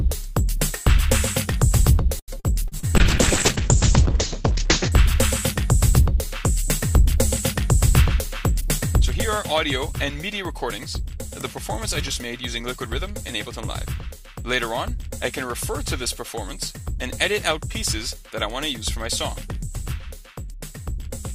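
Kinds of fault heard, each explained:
Repeated packet loss (robotic sound): From 2.19 to 2.89 s the stream loses packets four times in quick succession. Each hole, the longest about 85 ms, is bridged by stretching the previous sound, so roughly 194 ms is synthetic and about 120 ms simply absent, close to a third of the span. The result is choppy, with pieces missing. A spectrogram shows smeared, repeated harmonic blocks broken by short blank slivers, and the waveform shows flat or looped segments.
Call bitrate drop: Between 2.97 and 4.98 s the encoder is pushed from 48 kbps down to 6 kbps and stays at the floor for nearly two seconds. At that rate it codes coarsely and narrows the audio band from 20 kHz to 8 kHz, so the sound turns muffled and watery. On a spectrogram everything above 8 kHz is cut away with a sharp horizontal ceiling, and the remaining energy looks blotchy and quantised rather than finely detailed.
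Jitter buffer speed-up: From 12.37 to 13.98 s the receiver trims its excess buffered audio by dropping tiny pitch-period slices, around 70 ms in total. Pitch stays put but timing runs about 4% fast. A spectrogram shows no change in frequency, only events arriving a little early. In the waveform the periodic cycles join seamlessly at many small splice points, with the stretch slightly shorter than it should be.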